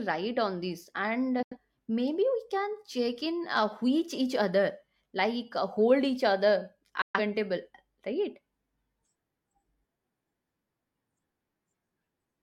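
A digital broadcast dropout: the receiver lost two short runs of frames and muted, fading out over about 3 ms. The speech drops to silence from 1.43 to 1.57 s, after "on this", and again from 7.02 to 7.20 s, after "uh hold each other".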